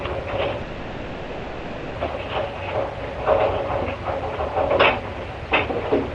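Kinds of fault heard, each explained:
Long network dropout: from 0.61 to 1.97 s the sound turns into a buzz or hiss that carries on from what came just before and fades, filling the 1.34 s gap without any silence, then resumes past the lost portion, likely because no audio arrived.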